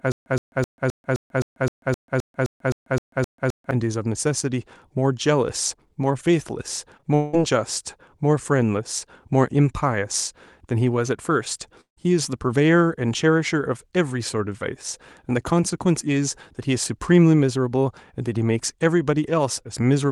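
From the start to 3.71 s, a 120 ms fragment repeats 14 times every 0.26 s with 140 ms of silence between: a stutter with silent gaps, likely from a stalled player.

At 6.97–7.01 s and 7.01–7.05 s, short concealed packet loss: about 20 ms each went missing, and the extrapolated fill makes a brief smear.

From 7.15 to 7.35 s, a long network dropout, likely lost packets, is filled entirely by a fading synthetic continuation. From 11.81 to 11.99 s, the filler fades into 120 ms of silence before the audio resumes.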